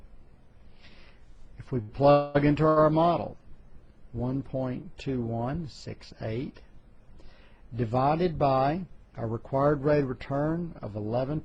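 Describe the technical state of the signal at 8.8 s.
At 8.8 s the signal is intact, with no audible technical fault at that point.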